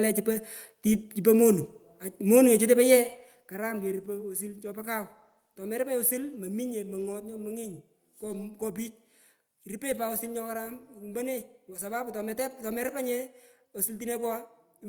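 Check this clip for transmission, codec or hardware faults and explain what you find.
No transmission, codec or hardware faults can be heard in this speech recording. The level rises and falls smoothly in places, the way a fader moves, and those changes sound deliberate and even.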